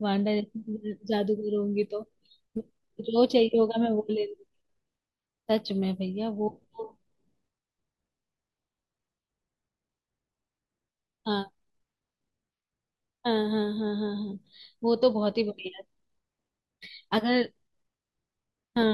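No technical faults are audible.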